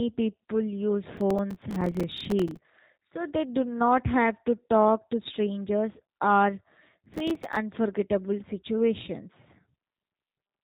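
Speech runs through a G.729 codec throughout: nothing reaches above about 3.8 kHz, and the voice has the slightly rough, synthetic buzz of a model rebuilt at what sounds like 8 kbit/s. Unlike plain telephone band-limiting, the damage lies in that artificial texture, not just the missing top. Processor overload crackle tears through 1.17 to 2.59 s and again at 7.06 to 7.56 s. Missed deadlines on buffers only a few milliseconds long leave rapid silent gaps with hard edges. The result is gritty crackle rather than the single longer dropouts of lost packets, and it stops when the load eases.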